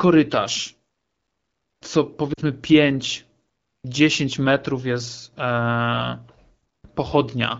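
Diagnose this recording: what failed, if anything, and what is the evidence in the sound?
Lost AMR speech frames in the radio link. From 2.33 to 2.40 s, a 40 ms stretch of speech smears and dips, which fits two missing 20 ms frames. The decoder bridged the gap by repeating the last pitch and vocal-tract settings at decaying gain, before clean AMR-WB decoding at 12.65 kbit/s resumed.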